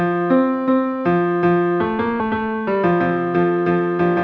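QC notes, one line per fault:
2.2 s, skip ahead: playback jumps forward with no fill and no real gap, so roughly 0.7 s of the sound just isn't there. A chunk was dropped while later audio was already queued, likely the jitter buffer overflowing, and the two sides of the cut get stitched together almost directly. That's why it lands as an abrupt splice rather than a dropout, and the delay falls by about the same 0.7 s.
2.30 to 4.15 s, jitter buffer speed-up: right after the jump the audio runs at about 112% speed but keeps its pitch, so it comes across as hurried rather than chipmunky. The buffer was still holding more than it wanted, so the receiver kept trimming tiny pieces of one or a few pitch periods back to back, shaving off around 0.2 s in total. All of this sits on top of a G.722 call path with nothing above 8 kHz.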